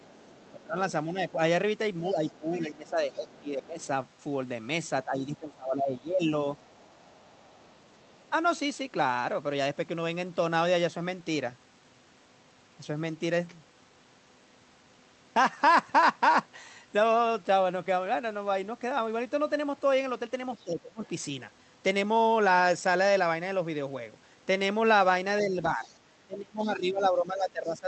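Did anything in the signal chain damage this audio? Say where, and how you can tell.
Yes. Other side's voice leaking through, from 0.0 to 8.29 s, 20.55 to 21.08 s and 25.84 to 25.97 s: a faint second voice, roughly 30 dB under the talker, sits in the call-processing stage. This is likely residual loudspeaker echo that the echo canceller left in the microphone signal.

Speech suppressed in double talk, from 0.52 to 6.27 s, 20.64 to 21.03 s and 25.42 s to the end: the talker's voice dips, by about 15 dB in the first and last spans and about 25 dB in the middle one. It likely comes from echo suppression pulling down both voices while they overlap.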